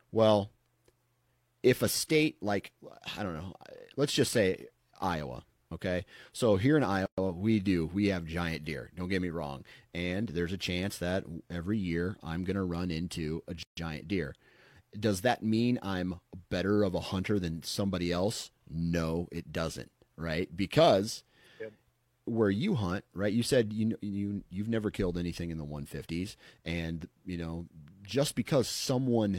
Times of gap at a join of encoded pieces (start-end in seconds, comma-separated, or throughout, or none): 7.06-7.18, 13.63-13.77